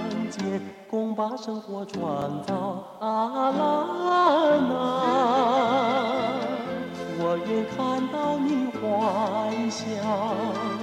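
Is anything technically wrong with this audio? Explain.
Yes. At 2.22 s there is a repeated buffer. The next block of audio did not reach the output in time, so the device replayed the block it had just played, once. Each block lasts about 2.9 ms, which fits a 128-sample buffer. The hard joins on either side of such a tiny repeated segment do not register as a stutter. They come through as a click or brief buzz, with roughly 3 ms of audio displaced.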